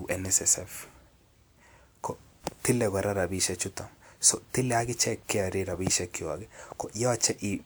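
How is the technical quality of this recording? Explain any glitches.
Good news: I can't hear a single glitch anywhere in this recording, so there's nothing to explain.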